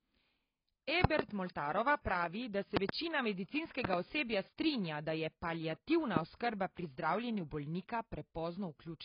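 Across the whole clip the speech sounds dull and smeared, with nothing above 5.2 kHz and a heavily damaged, warbling or fizzy texture on sustained sounds and sibilants. This is likely AAC compression (AAC-LC) at a very low bitrate, around 16 kbps. At that rate the encoder lowers its cut-off and, guided by its hearing model, quantises the frequency lines so coarsely that detail drops out of the spectrum.

Loud pops then land on top of the speech, which carries on underneath. From 1.04 to 1.22 s there are two pops in quick succession, roughly 25 dB above the signal. Just after "pravi da", another pair runs from 2.77 to 2.92 s, again around 25 dB. A third pair follows from 3.85 to 3.96 s, about 20 dB up. A single pop comes at 6.17 to 6.19 s, after "da je paliativna", roughly 15 dB up. Each is likely a sudden voltage step or pulse added to the signal and then shaped by the circuits after it.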